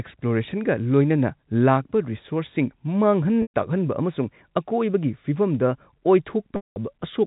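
Packet loss with pitch repetition breaks this speech twice, at 3.42 to 3.51 s and at 6.56 to 6.76 s, covering about 120 ms and 200 ms of lost audio. Each time, the receiver repeats the last pitch period, which gives a brief held, buzzy tone. That tone fades into silence over roughly 50 ms, and the speech then cross-fades back in. The second, longer gap leaves more silence. The G.711 telephone coding limits everything to below 4 kHz.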